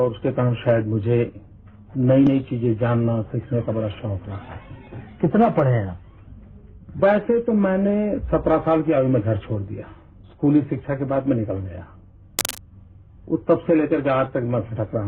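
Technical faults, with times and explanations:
12.39 to 12.59 s, cable scratch noise: for about a fifth of a second, a dense, ragged scratching and rustling sits over the sound, only slightly quieter than the sound itself, then stops as suddenly as it began. The most likely cause is a worn cable, connector or control being moved, so that its contact resistance jumps about rapidly and injects irregular bursts of noise into the signal for as long as the movement lasts.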